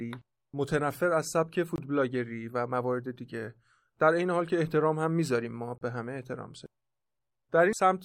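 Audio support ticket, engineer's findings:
Speech drops out briefly and restarts mid-flow: about 21 ms silence at 1.76 to 1.78 s, about 32 ms at 5.78 to 5.81 s, edges smeared. Gap at a join of encoded pieces: untrimmed encoder start delay and last-frame padding, roughly 4 s chunks.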